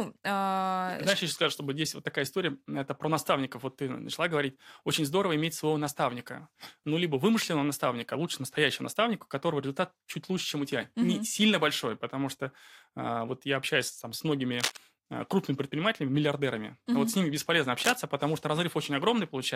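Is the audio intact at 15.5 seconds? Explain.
Yes, at 15.5 seconds the speech is intact, with no dropout, glitch or other fault at that moment.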